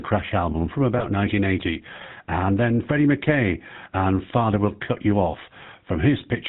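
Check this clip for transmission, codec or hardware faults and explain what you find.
Two faults are present: the whole clip has passed through the GSM full-rate codec, and there is one brief lost GSM frame early on.

Throughout, the speech has been coded by the original GSM full-rate codec, which fits a 13 kbps full-rate coder. This codec models the vocal tract as a filter and excites it with a sparse, regularly spaced pulse train carrying only a third of the excitation samples. Nothing above 4 kHz gets through. The result is plainly audible: a muffled top end and a buzzy, gravelly roughness laid over the voice.

From 0.98 to 1.06 s a lost GSM frame interrupts the signal, consistent with a single dropped 20 ms frame. The decoder had no valid data for that slot, so it reused the parameters of the last good frame instead of inserting silence. Because the gap is so short, the repeated frame comes through as a quick rough, metallic ring before normal decoding resumes, with no fade-out to silence.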